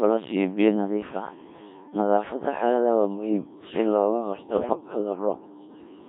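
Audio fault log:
Throughout, Codec 2 vocoder: the sound is rebuilt from sine waves rather than passed as a waveform, so it comes out robotic and buzzy with heavy coding damage. Only pitch, voicing, energy and a coarse spectral envelope survive, and the thin, synthetic texture fits a rate near 1.3 kbit/s. Everything sits inside a narrow radio band from about 150 Hz to 3.6 kHz, so low warmth and upper detail are both gone.
4.53 to 4.81 s, bit errors on digital voice radio: for just under a third of a second the synthetic sound lurches in pitch, loudness and tone colour, breaking into warbling, bleepy gibberish. In a vocoder this sparse, each flipped bit rewrites a whole frame's parameters, so corruption on the order of one bit in ten turns into wild jumps rather than hiss. The length of the burst fits about six damaged frames.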